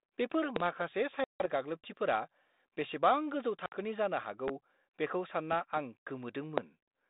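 Speech heard over a narrowband telephone channel, band-limited to roughly 200 Hz to 3.7 kHz and carrying the faint coding grain of G.726 ADPCM at 32 kbit/s, is interrupted by loud pops and by packet loss on an ADPCM call. The pops stand out sharply above the speech, which continues beneath them. The first, at 0.56 to 0.64 s, is a double pop peaking about 20 dB above the signal. A single pop at 4.48 to 4.51 s, just after "जानो हागौ", reaches about 15 dB, and another at 6.58 to 6.61 s reaches about 20 dB. Their sharp onset points to a likely voltage transient such as a plug, switch or static discharge. The packet loss cuts hard-edged holes into the speech: 160 ms within 1.24 to 1.47 s, amounting to several lost packets, and 60 ms within 3.66 to 3.75 s, a few packets, just before "जानो हागौ बेखौ". During each gap the decoder's adaptive predictor and step size drift away from the sender's, so the speech comes back slightly distorted, settling over the following tens of milliseconds.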